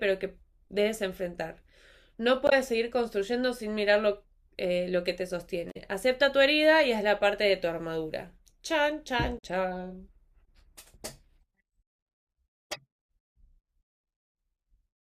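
At 2.47–2.53 s, 5.70–5.77 s and 9.37–9.43 s the speech breaks up briefly, each about 50–65 ms, from damaged data in the compressed stream. Corrupted bytes make the decoder misread frames and lose sync until it finds the next valid frame header.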